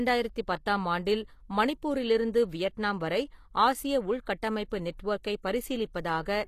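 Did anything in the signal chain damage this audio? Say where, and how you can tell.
Yes, at the codec stage, audibly throughout the speech. Everything above about 14.9 kHz is missing, yet the treble still reaches higher than plain AAC would at this bitrate. Sibilants come out gritty and lispy, with a metallic sheen that doesn't track the voice's harmonics. That points to a likely HE-AAC compression pass at a low bitrate, around 24 kbps. Only the lower spectrum is coded; the treble is rebuilt by copying lower bands upward under a coarse envelope, so it misaligns at the crossover.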